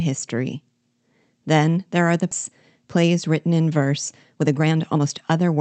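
This speech clip passed through an Opus call path with its top end cut near 8 kHz, and it has two faults. A skip ahead occurs at 2.31 to 2.33 s, just after "there are the": a stretch was dropped while later audio already waited, so roughly a second vanishes and both sides join almost directly. Jitter buffer speed-up follows, as the buffer trimmed pitch-period pieces to shed excess delay. At 2.87 to 3.48 s the speech runs 107% fast, losing about 50 ms, and at 4.38 to 5.57 s it runs 127% fast, losing roughly 300 ms, so it sounds hurried at an unchanged pitch.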